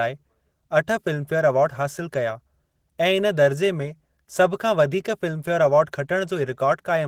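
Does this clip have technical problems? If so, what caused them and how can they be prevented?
Yes. Opus voice compression is plainly audible throughout the speech. The codec runs in hybrid mode. Linear prediction codes the lower band, and a transform layer handles everything above 8 kHz. The band stays fullband, with content reaching about 20.3 kHz. The damage sounds like a bitrate near 16 kbps, spread too thinly over that whole range. So the excitation is coded coarsely, and the lost detail is clearly heard. To prevent it, encode at a higher Opus bitrate.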